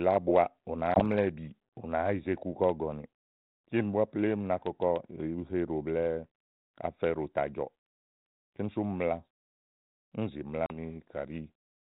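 Packet loss on an ADPCM call strikes at 0.94 s and again at 10.66 s in this speech, carried over 32 kbit/s G.726 ADPCM. The first leaves a 20 ms hard-edged silent hole, about one packet; the second a 40 ms hole, around two. The decoder's adaptive predictor and step size drift from the sender's, so speech resumes slightly distorted, settling by 1.01 s and 10.76 s.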